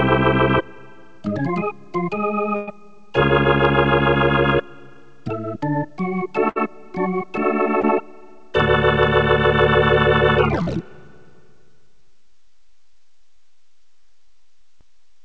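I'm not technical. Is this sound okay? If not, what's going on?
No. There is a burst of packet loss at 2.56 to 2.69 s and again at 6.49 to 6.57 s. Chunks of the call, about 120 ms and then 60 ms, were lost or arrived too late. The receiver stretched the last sound and faded it into a held buzz or hiss, then jumped ahead.

Short concealed packet loss happens at 7.81 to 7.85 s and 10.62 to 10.69 s. Smaller gaps of about 20 and 40 ms were patched by guessing a continuation of the previous sound, then blending back. Each one is heard as a quick smear or wobble, and a tiny sound can disappear. Throughout, the call system trims everything above 8 kHz, which gives a dulled top end.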